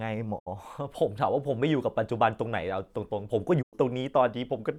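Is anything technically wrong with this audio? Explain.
Yes, there are two digital broadcast dropouts in this speech. The first runs from about 0.38 to 0.48 s and the second from 3.61 to 3.75 s. Each time, the receiver evidently stopped getting decodable frames and muted, fading down over about 20 ms into a silent gap before picking back up. That's roughly 64 ms lost the first time and 96 ms the second, which points to two and three frames dropping out. Whatever was broadcast during those holes is gone.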